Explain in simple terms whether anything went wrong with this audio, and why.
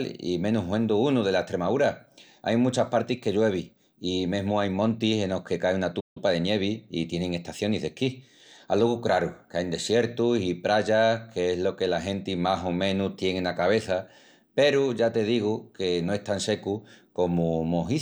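Yes, the speech briefly cuts out. At 6.0 s, right after "enos que cai una", the sound goes silent for about 0.15 s before continuing with "de nievi i". This is a playback stall, likely the player running short of data. Unlike a natural pause, the silence interrupts the speech mid-flow.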